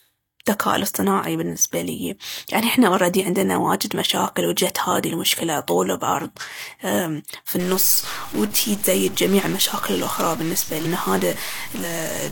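From 7.60 s to the end, the speech is distorted, and pauses fill with noise. A stuck bit in the converter or data line is the likely cause.

At 10.82 s the audio jumps ahead by about 300 ms. At 11.80 s it jumps about 150 ms. These are compressed frames skipped. The jumps fit multiples of a 42.7 ms frame.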